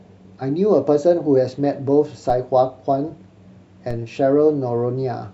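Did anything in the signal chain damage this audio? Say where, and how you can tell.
Yes. Two low thumps land at 2.30 s and 3.91 s while the speech carries on untouched, each a DC step of about -23 dBFS. The converter or input stage shifted the waveform's zero line abruptly, and a 5 Hz high-pass then bled each offset away.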